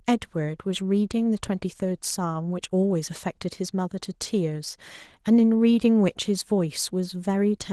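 Opus voice compression runs throughout the speech, from start to finish. The damage is plainly audible and fits a low rate of around 16 kbps. The sound points to hybrid coding: a linear-prediction core carries the range below 8 kHz, and a thin transform layer fills the top band. With too few bits, the excitation is quantised coarsely, so the voice sounds hoarse, muffled and faintly robotic.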